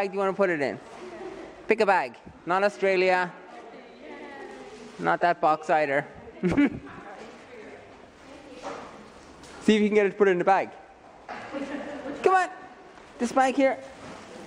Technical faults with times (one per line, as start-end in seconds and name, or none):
4.18-4.30 repeated frames